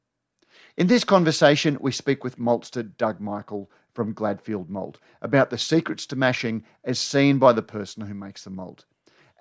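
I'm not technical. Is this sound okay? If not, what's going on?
Yes, nothing in this recording points to a technical problem with how the sound was captured or delivered.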